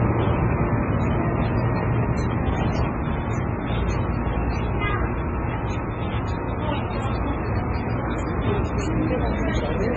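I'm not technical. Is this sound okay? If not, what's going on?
No, not quite. All the way through, it sounds dull. Nothing above about 8 kHz survives, so there's no crisp top end, and the leftovers of two different squeezing processes are heard together on top of that. That points to transcoding between lossy codecs: the audio was likely squeezed down small once, say as an MP3, then converted again into another compact format. The second pass added its own artefacts on top of the first and couldn't restore the lost treble.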